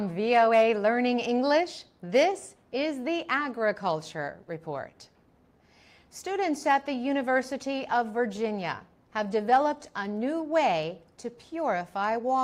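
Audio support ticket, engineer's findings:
Clock drift between sender and receiver, throughout: sender clock about 2% slow, so the jitter buffer keeps draining. Steady one-way lag, unlike random network jitter.

Repeated timing corrections, 0.40–12.28 s: receiver repeats short pieces, playback at 98% speed, roughly 0.2 s added. Uneven slight hiccups, all stretching.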